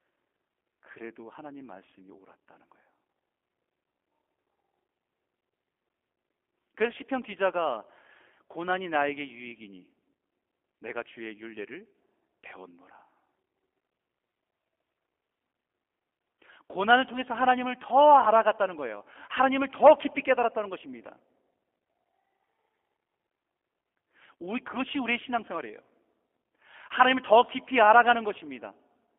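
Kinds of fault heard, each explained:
G.729 codec: The whole clip sounds like it's been through a low-rate VoIP codec that rebuilds speech from a model of the vocal tract plus a pitch predictor and a few pulses per frame, rather than sending the waveform itself. The band runs only from about 250 Hz to 3.4 kHz, and there's a plainly audible rough, slightly synthetic edge, which fits the 8 kbit/s G.729A variant.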